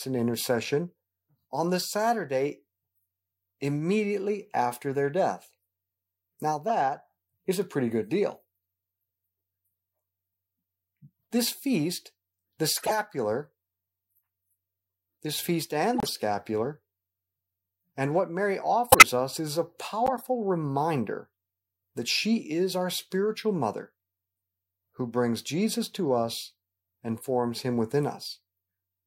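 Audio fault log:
6.68–6.71, 12.75–12.96 (after "feast the"), 15.94–16.09 (after "this feast"), 18.91–19.03 (just before "us is") and 20.06–20.22 s, corrupt frame decoded: damaged compressed frames got played anyway, so misread gains and codes drop energy at the wrong frequencies and you get short chirps and noise bursts. The first is a single tiny blip at about −20 dBFS. The rest are longer and run across several frames in a row. The loudest is at 18.91 s, peaking around −5 dBFS.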